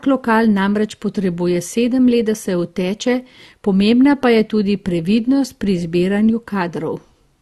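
From start to finish the speech carries layered coding artefacts and has no content above 12.1 kHz. The sound points to transcoding between lossy codecs, likely a 48 kbit/s Opus encode passed again through AAC-LC at a similar rate. The second encoder spends its bits reproducing the first one's artefacts and adds its own, while the lower bandwidth limit holds. The result is a dull top end with two kinds of artefact heard at once.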